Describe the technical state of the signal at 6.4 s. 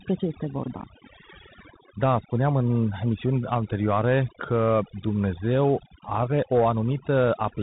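Overdone noise removal is active at 6.4 s, as it is across the whole clip. The suppressor pushes any frequency band near its noise estimate far down or out entirely. The background drops and breaks up into twinkling, warbling specks. Softer parts of the speech are stripped away.

The Bluetooth CVSD headset codec also runs throughout. It codes each sample as a single up-or-down bit with an adapting step, which fits a 64 kbps link. Nothing above 3.8 kHz survives. Sharp high sounds outrun the step and distort, s sounds turn scratchy, and a grainy hiss sits under the speech.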